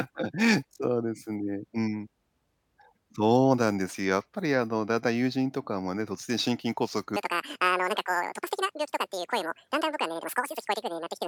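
From 7.16 s to the end, the speech jumps to double speed and an octave up: audio read two samples at a time, each pair taken as one frame.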